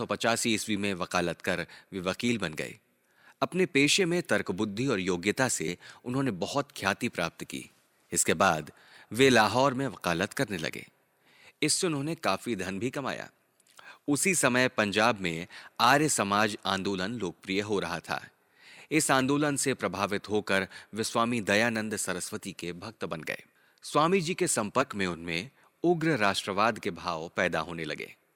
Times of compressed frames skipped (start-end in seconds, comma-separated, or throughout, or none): 4.00, 5.67-5.70, 24.81-24.84